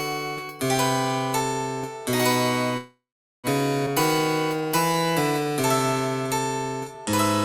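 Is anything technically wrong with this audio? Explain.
Yes, there are three distinct faults.

From 2.77 to 3.47 s there is a call audio freeze. The sound stops moving forward, the last moment is held as a fading buzz or hiss, and then about 420 ms is simply silent before the audio resumes where it left off. The likely cause is packets held up in transit, leaving the jitter buffer empty. On a waveform this appears as a decaying tail followed by a flat line. On a spectrogram it shows as smeared, frozen bands that fade to blank.

At 3.86 to 3.89 s the audio skips ahead. Roughly a fifth of a second is missing, and the two sides are butted together with only a tiny 7 ms join. The stretch was dropped while later audio was already queued. A spectrogram shows an abrupt vertical seam where the patterns on either side don't match, and the waveform shows a sudden change of shape with no pause.

From 4.57 to 5.52 s there is a jitter buffer slow-down. 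The receiver repeated single pitch periods to rebuild its reserve, adding 114 ms, so this section plays at about 89% speed with the pitch unchanged. Sounds are drawn out. On a spectrogram the harmonics stay at the same height but stretch sideways, and the waveform shows runs of near-identical repeated cycles.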